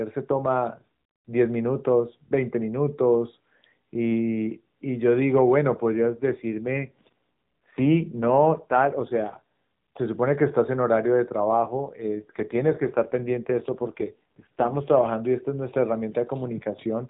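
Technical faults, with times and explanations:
5.95–9.42 s and 11.52–15.08 s, AMR rate drop: speech turns rougher and more synthetic with no gap or band change, fitting a switch from 12.2 to 5.9 kbps to protect against link errors.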